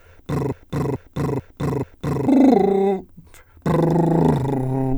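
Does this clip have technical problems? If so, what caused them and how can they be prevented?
Yes. A broken-record loop runs from 0.52 to 2.27 s: a 0.44 s fragment of the music repeats four times, replacing the passage that belonged there. A stalled player or stream likely kept resending its last fragment. Flushing buffers on a stall prevents it.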